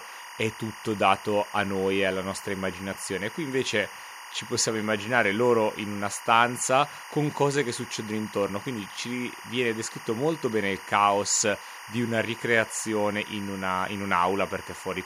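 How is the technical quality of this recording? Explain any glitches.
The speech has one problem running the whole way through: timecode bleed. Linear timecode from a nearby track or cable is leaking in, adding a steady chirping warble around 1 and 2 kHz, roughly 15 dB under the voice. Its rhythm fits 24-frames-per-second code.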